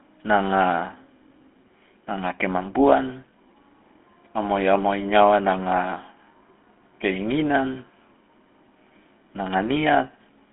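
From start to end the speech carries GSM full-rate codec damage, plainly audible: a buzzy, gravelly roughness, consistent with the roughly 13 kbps of that early phone codec. It rebuilds the voice from a vocal-tract model excited by regularly spaced pulses, so the grit rides on the voicing itself. The sound sits in a 250 Hz to 3.4 kHz line band with nothing above 3.8 kHz. Simple band-limiting would sound muffled but clean; this sounds coarse.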